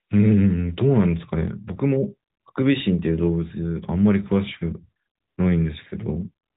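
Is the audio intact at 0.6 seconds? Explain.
Yes, the audio is intact at 0.6 seconds: there is no dropout, click or other fault there, only the steady narrowband sound of AMR-NB mobile coding at 12.2 kbps, with nothing above about 3.8 kHz.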